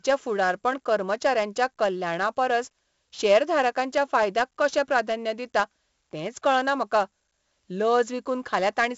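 From start to finish, the speech carries heavy 4-bit ADPCM compression damage. Each sample is coded as a coarse 4-bit step from a prediction, so the coding error rides as broadband grit that rises and falls with the signal level, loudest on stressed syllables and smeared on sharp onsets where the adaptive step lags behind. Nothing is present above about 7.7 kHz, which points to a 16 kHz sample rate and a 64 kbps stream, leaving the top end dull.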